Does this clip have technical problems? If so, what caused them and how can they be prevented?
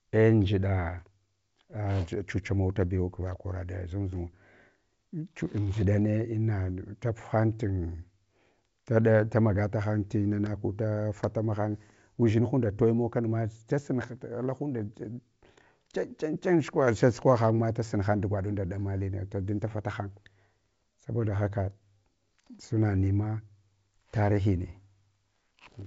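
No, there's nothing wrong here: the speech comes through G.722 wideband telephone coding at 64 kbit/s, which is why the sound stops at about 7.7 kHz, so there's nothing to trace back or prevent.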